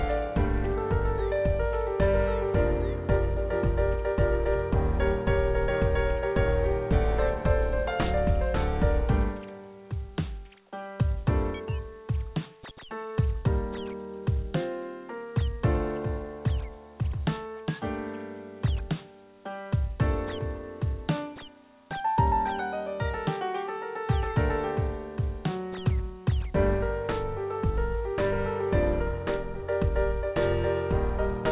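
Nothing stood out as a fault on listening, with the sound carried over the call path at the narrow telephone bandwidth expected of G.711 mu-law, which holds nothing above 4 kHz.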